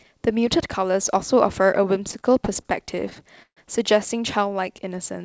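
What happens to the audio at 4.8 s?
At 4.8 s the speech is inside a jitter buffer slow-down, from 4.49 s to 5.25 s. The receiver repeats single pitch periods to rebuild its reserve, adding 59 ms and playing at 93% speed at the same pitch. Spectrogram harmonics stay level as sounds stretch, and the waveform shows identical repeated cycles.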